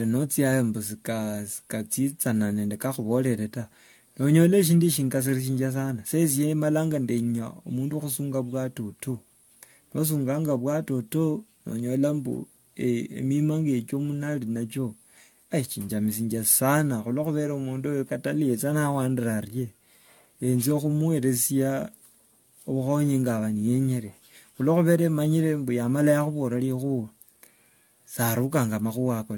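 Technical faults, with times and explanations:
Throughout, generation loss: the speech sounds swirly, smeared and hollow, with softened consonant onsets and no content above 17 kHz. This is likely the result of around five successive AAC-LC encodes, at a rate that fits about 96 kbit/s. Each decode and re-encode quantises the signal again on a shifted frame grid, so coding noise and spectral gaps accumulate well beyond what a single pass at that bitrate would leave.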